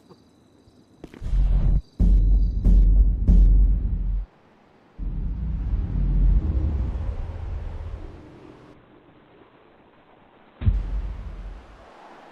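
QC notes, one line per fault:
8.74–10.74 s, adaptive stream at a lower bitrate: for two seconds the quality suddenly drops, with added codec artefacts and no gap at either edge. The stream briefly fell back to a much lower-bitrate encoding, which fits a drop from roughly 64 to 12 kbit/s Opus.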